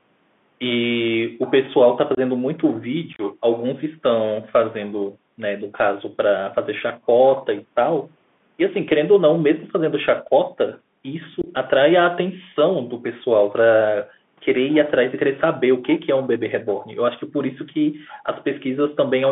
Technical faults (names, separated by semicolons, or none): Bluetooth CVSD headset codec; unconcealed Bluetooth headset packet loss